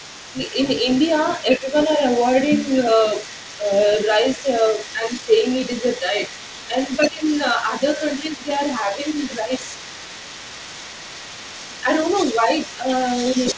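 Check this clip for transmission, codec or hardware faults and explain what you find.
The clip has two faults, both tied to echo cancellation on the talker's side. The call-path band-limit is audible too: nothing reaches above 8 kHz, consistent with a wideband G.722 codec.

Other side's voice leaking through, from the start to the end of the clip: a second voice sits underneath the speech throughout, roughly 20 dB down. The likely cause is far-end audio from the talker's loudspeaker being picked up again by the microphone and only partly removed by the echo canceller. It comes through as a faint second voice that never fully goes away.

Speech suppressed in double talk, at 0.09 to 0.37 s, 1.57 to 2.02 s, 3.19 to 9.52 s, and 11.69 s to the end: the talker's level sags by around 10 dB in patches. The short first two spans lose only fractions of a second. The long middle span has a second or more of dips scattered through it. 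The likely cause is the canceller failing to separate the talker from the overlapping echo and turning both down. The speech sounds pumped and momentarily recessed.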